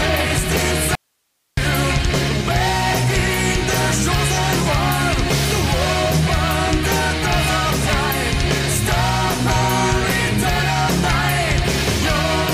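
At 0.95 s the sound cuts out abruptly and returns at 1.57 s, an audio dropout to a faint residue lasting about 620 ms. Only hiss remains, roughly 50 dB below the signal. The wanted signal was likely lost while the downstream path stayed live.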